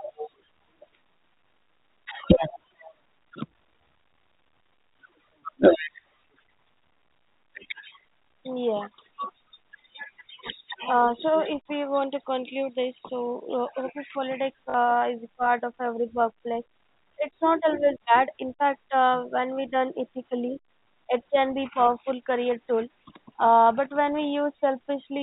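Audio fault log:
14.70 to 14.74 s, packet loss with last packet repeated: for 40 ms the same slice of speech replays instead of dropping to silence, so a brief robotic stutter and a buzz that fits two 20 ms packets repeating at 50 Hz, over the narrow G.711 telephone band.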